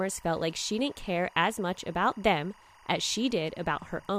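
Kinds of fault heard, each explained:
Timecode bleed: A steady chirping warble, well below the speech and present throughout, shows linear timecode leaking in from a neighbouring track or cable. Its square wave flips between pitches around 1 and 2 kHz, repeating at 24 frames per second.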